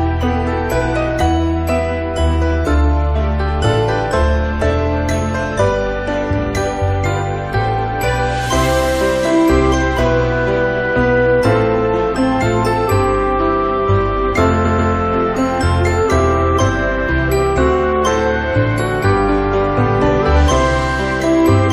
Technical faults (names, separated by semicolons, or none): repeated frames